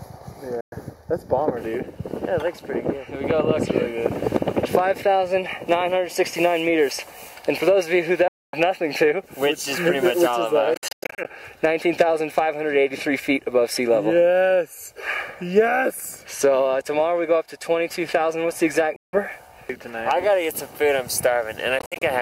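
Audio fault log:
0.00–1.57 s, channel delay (comb filtering): a copy running about 0.2 ms late, summed with the original, cancels at evenly spaced frequencies, the first near 3 kHz. The result is a hollow, phasey tone. A spectrogram shows fixed, evenly spaced horizontal notch bands.
0.61–0.74, 8.28–8.57, 10.74–11.27, 18.96–19.16 and 21.79–22.02 s, Bluetooth dropout: the sound cuts out for 112, 252, 168 ms, or in broken clusters (294 ms lost across 0.5 s and 126 ms across 0.22 s), then resumes as if it had played on. This is likely from late packets being discarded. The waveform shows silent holes, and the spectrogram shows blank vertical strips.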